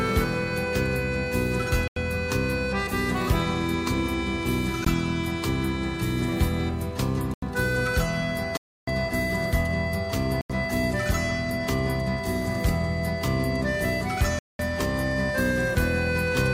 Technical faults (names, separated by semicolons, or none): block of digital silence